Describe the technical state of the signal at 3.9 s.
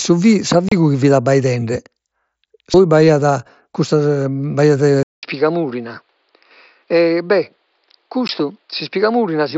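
At 3.9 s the signal is intact, with the speech passing cleanly through the mSBC Bluetooth headset link and no fault at that moment.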